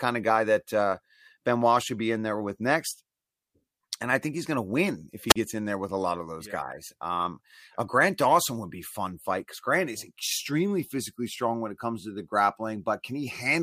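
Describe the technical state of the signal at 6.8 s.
At 6.8 s the speech signal is intact, with no audible fault at that point.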